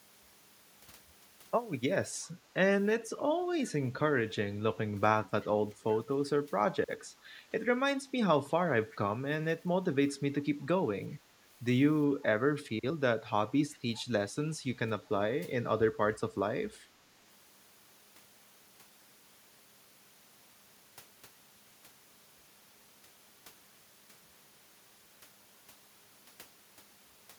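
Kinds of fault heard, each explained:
Echo leak: faint scraps of a delayed copy of the speech appear at 2.24, 5.42, 8.91, 11.11, 13.73 and 13.97 s. Each lasts about 50 ms, trails the original by a fixed 379 ms and sits roughly 25 to 35 dB below it. The likely cause is a loudspeaker at the other end whose echo canceller let part of its pickup return. Room reverberation smears continuously, but these are separate fragments at one unchanging delay.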